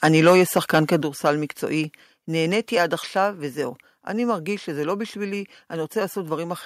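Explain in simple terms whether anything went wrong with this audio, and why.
From 0.03 to 0.79 s, and again briefly at 1.26 to 1.3 s, the speech has a harsh, crackly edge on its loudest moments. This is microphone overload: the input was likely set too high, so the tops of the sound waves were cut off flat.

At 1.02 s and again at 3.06 s, the voice and background both drop suddenly in loudness. This is the microphone volume stepped down, likely by the call software reacting to those overloaded peaks. The first drop is larger, the second smaller.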